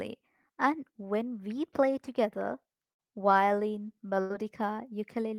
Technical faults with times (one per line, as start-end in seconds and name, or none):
2.91-3.01 burst of packet loss
4.21-4.32 burst of packet loss